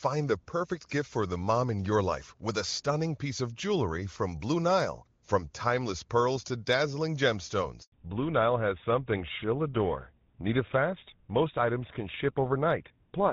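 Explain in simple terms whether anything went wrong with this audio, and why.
At 7.82 seconds the sound cuts out completely for about 100 milliseconds. This is a handover gap. The phone was passing the call from one network link to another, and for that moment nothing came through. The sound fades almost instantly, goes silent, then resumes when the new link takes over. Whatever was said during that tenth of a second is gone for good.

Right after the gap, from 7.92 seconds to the end, the sound changes character. This is a fallback to narrowband. Before the switch the call used HD Voice, which sounds clear and full. Afterwards it drops to an older narrowband phone codec, and everything above 4 kHz disappears. The crisp, airy top is missing, so the sound turns duller, more muffled and rougher.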